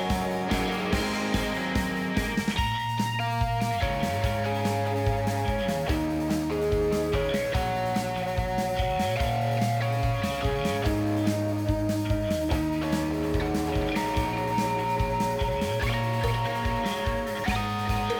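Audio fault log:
No fault in this audio.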